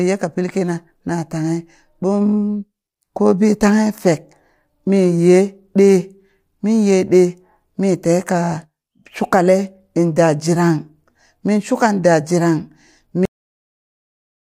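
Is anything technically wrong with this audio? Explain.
Yes. The speech has a cut-off end at 13.25 s: the final stretch of audio was never written out or sent to playback, so the stream simply stops there rather than finishing. In the sound, the speech breaks off partway through, with no natural fade or room decay, and drops straight to digital silence that runs for about 1.3 s to the end of the file.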